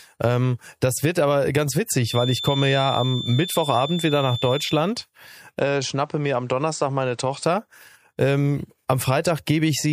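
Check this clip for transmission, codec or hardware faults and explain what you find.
Two faults are audible in this speech clip.

From 1.99 to 4.88 s, right after "das wird aber ganz", there is a feedback whistle. A thin, steady tone at 3.5 kHz sits behind the speech, roughly ten decibels below it. Its level swells and fades slowly. It never grows or runs away. The likely cause is a loudspeaker-to-microphone loop held just at the edge of feedback. That lets this one frequency keep ringing.

From 5.59 to 7.44 s, the sound changes abruptly. There is no gap at the change. Nothing above 8.9 kHz remains, so the speech turns duller. The level drops by around 5 dB. A new, faint background noise appears, far below the speech. This points to an input switched to a poorer device, likely a different microphone or a headset in call mode. That device has a narrower band and its own noise floor. The fuller sound returns at 7.44 s.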